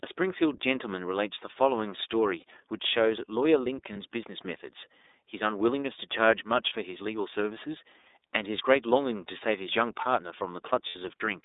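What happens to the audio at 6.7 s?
At 6.69 to 6.73 s there's a lost iLBC frame, about one 30 ms packet's worth. The decoder repeats the last pitch cycle with some noise, so you hear a brief held, buzzy vowel before it snaps back. Underneath, the whole clip carries the iLBC codec: band-limited to roughly 300 Hz to 3.7 kHz, with plainly audible roughness.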